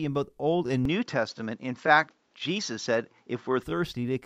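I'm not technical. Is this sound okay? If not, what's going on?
No. From 0.85 to 3.63 seconds the speech sounds duller, missing its crisp top above 7.6 kHz. A faint new hiss appears. The cause is likely an input switched to a poorer device. It changes over cleanly, with no gap or loudness jump.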